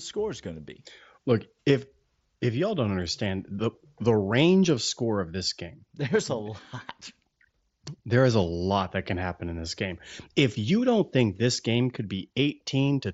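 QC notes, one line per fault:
No faults are heard anywhere in the clip. The speech comes through the Bluetooth mSBC headset codec, with the band stopping around 8 kHz and a light grainy texture on the loudest syllables, as that wideband headset link normally gives.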